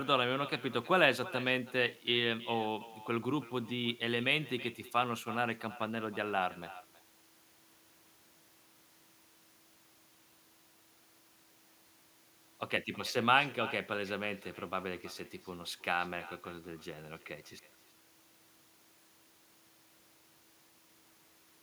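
Echo with no canceller runs through the whole clip, from start to finish. At the far end the call was played over a loudspeaker. That microphone picked it up and sent it back, and no echo canceller removed it. Each stretch of speech is followed, roughly a third of a second later, by a quieter, thinner copy of itself. That copy sits about 17 dB below the direct speech, so it shadows every phrase.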